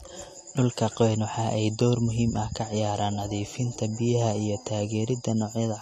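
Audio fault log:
Throughout: low-bitrate audio saved at a high bitrate. Nothing above 14 kHz. The cut-off likely survives from an earlier low-bitrate encode. Re-saving cannot restore it.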